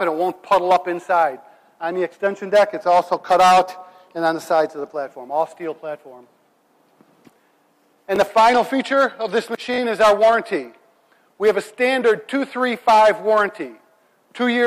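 A brief buzzy stutter at 8.16 to 8.18 s, then a slightly longer one at 9.74 to 9.78 s. This is a repeated buffer: new audio arrived late, so the last roughly 20 ms block played again, once, then twice, each with a hard join.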